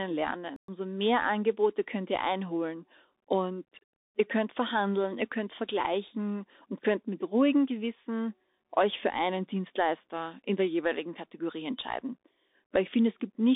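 From the start, the whole clip carries the Bluetooth CVSD headset codec. Nothing passes above about 3.7 kHz, s sounds turn scratchy, and a grainy hiss sits under the speech; loud high sounds distort because the one-bit delta coder's adapting step cannot keep up with them. That hiss and slope distortion set it apart from clean telephone band-limiting.

At 0.56 s the speech stops dead for 120 ms and resumes at 0.68 s. This is a playback stall, likely the player running short of data. The gap is plain silence, which distinguishes it from a packet-loss concealment glitch.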